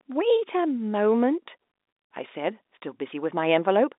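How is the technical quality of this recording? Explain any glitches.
Nothing's amiss here: it's just ordinary telephone-line speech in G.711 mu-law coding at 64 kbps, so everything sits in the usual band from about 250 Hz to 3.7 kHz with nothing above 3.8 kHz, and there are no glitches to explain.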